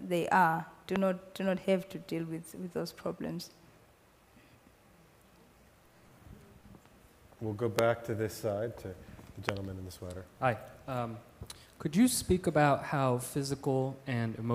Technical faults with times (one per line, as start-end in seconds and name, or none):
0.96-0.98 loud pop
7.79-7.81 loud pop
9.49-9.51 loud pop